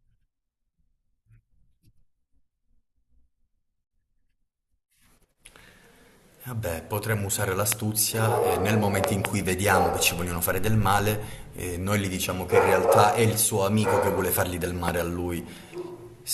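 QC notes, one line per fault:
7.72–7.74 s, 9.04–9.27 s, 14.88–14.90 s: loud pop. Single pops at the first and last times, a double pop at 9.04–9.27 s, each peaking around 20 dB above the speech, which continues underneath. This is likely a voltage spike from a switch, plug or static. Tall narrow waveform spikes; thin full-height vertical lines on the spectrogram.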